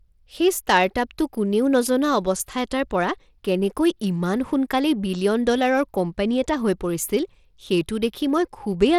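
A speech recording that sounds gritty and coarse from start to finish, with the treble thinning and flickering rather than holding steady, and nothing at all above 17.3 kHz. The likely cause is Bluetooth SBC compression at a starved bit pool, roughly what a 96 kbps stream would give: the upper sub-bands receive few or no bits and drop in and out, while the remaining bands are quantised so crudely that a grainy noise and aliasing cling to the speech.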